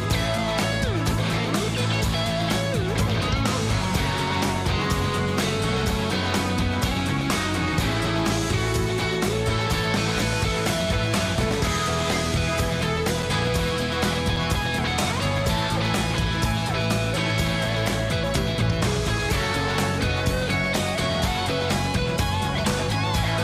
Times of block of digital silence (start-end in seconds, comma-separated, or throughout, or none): 14.36